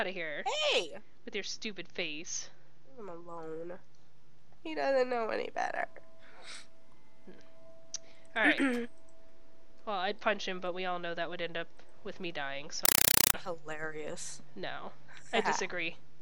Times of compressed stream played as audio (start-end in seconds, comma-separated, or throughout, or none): 12.85-13.34